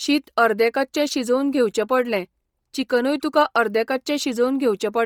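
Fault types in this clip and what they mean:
Bluetooth LC3 compression: Throughout the speech there is a breathy, grainy edge. The high end is present but rough, with hiss-like texture where fine detail should be, while content still reaches about 20.2 kHz. This is likely LC3, the Bluetooth LE Audio transform codec. At a low rate, consistent with a 32 kbps stream in 10 ms frames, it discards much of the upper spectrum and substitutes noise, which here causes heavy damage.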